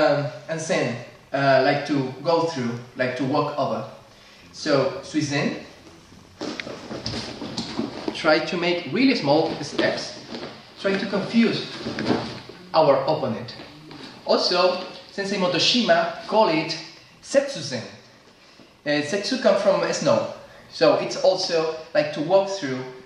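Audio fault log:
No technical faults are audible anywhere in this recording.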